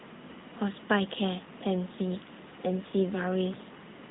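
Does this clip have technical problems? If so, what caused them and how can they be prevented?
Yes. The speech runs through an AMR narrowband mobile codec for the whole clip, leaving a buzzy, synthetic edge that points to a mid-rate mode near 10 kbps. A spectrogram shows a hard ceiling at about 3.8 kHz, because 8 kHz sampling and a frame-by-frame vocal-tract model keep nothing higher. Prevent it by recording or routing calls through a wideband path rather than a 2G/3G narrowband link.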